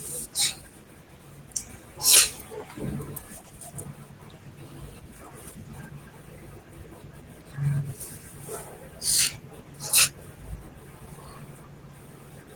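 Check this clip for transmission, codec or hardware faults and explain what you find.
No transmission, codec or hardware faults turn up anywhere in this speech clip.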